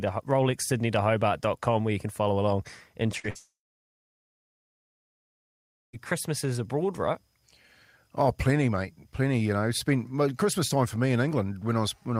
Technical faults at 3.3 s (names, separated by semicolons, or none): short concealed packet loss; burst of packet loss; long network dropout